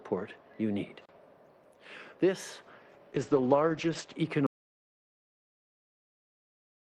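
At 3.15 s there's a call bitrate drop: the top end collapses from around 20 kHz to 8 kHz and things go rough and muffled until 4.23 s, consistent with the encoder falling from about 40 to 10 kbps. Then at 4.47 s an audio dropout to silence hits: plain silence with no room tone through to the end, likely a lost input or a stray mute.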